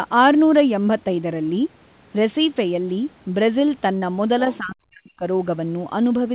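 At about 3.98 s there's a short concealed packet loss: roughly 40 ms never arrived in time, and about 35 ms got papered over, so you hear a brief smear before the audio picks back up. Around 4.52 to 4.58 s, a faint scrap of the other side's voice leaking through shows up, sitting roughly 25 dB under the talker, likely from the loudspeaker echo slipping past the canceller. Right after, from about 4.59 to 5.25 s, the talker dips hard, nearly vanishing at its deepest. That's likely speech suppressed in double talk, with the canceller ducking everything while both sides overlapped. Throughout, the G.711 call path keeps it all narrowband, with nothing above 4 kHz.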